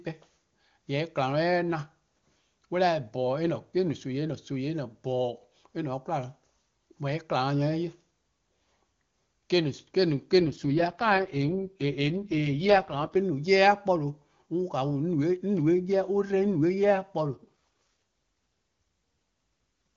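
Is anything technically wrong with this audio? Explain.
Yes. From 10.40 s to 13.15 s the speech turns rough, raspy and synthetic, though the bandwidth stays put and nothing drops out. This is an AMR rate drop. The sound points to the AMR-WB codec falling from the clear 23.85 kbit/s heard before and after to its lowest rate of about 6.6 kbit/s, as the network shifts bits toward error protection on a weak link. The pulse-driven model then has too little detail to shape the voice, until the rate recovers.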